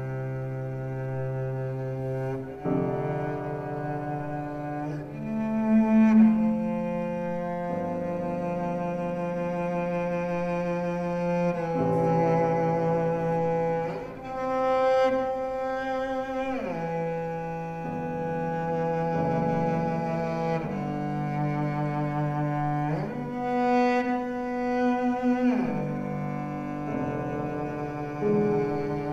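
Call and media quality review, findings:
No audible faults found in this recording.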